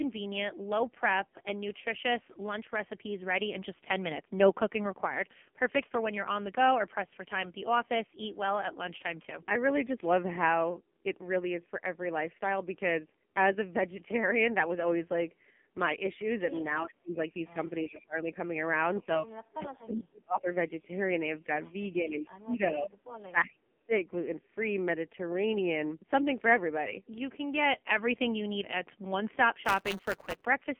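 Throughout the clip, the speech has passed through the AMR narrowband mobile codec at a low 5.9 kbps. The line band runs from 200 Hz to 3.4 kHz and nothing above 4 kHz survives, so the voice is muffled and the heavy coding damage makes it buzzy and synthetic.

From 16.85 to 18.36 s, 19.06 to 20.87 s and 21.92 to 23.93 s, speech is suppressed, likely by an echo canceller that heard both sides at once during double talk and turned the talker down. The voice sinks by about 25, 35 and 30 dB and drops out in pieces, each span losing roughly a second or less.

From 19.94 to 20.42 s and again from 20.99 to 23.54 s, an echo leak, likely from a loudspeaker whose canceller missed part of the pickup, sends back a copy of the voice delayed by 354 ms. It sits about 25 dB and then about 20 dB below the speech.

From 29.65 to 30.45 s, buffer tearing sets in. The writer and reader of the ring buffer have drifted so that a small slice of each period holds audio about 10 ms old, with hard joins on both sides. 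This produces a robotic 188 Hz buzz, which fits a 256-sample buffer.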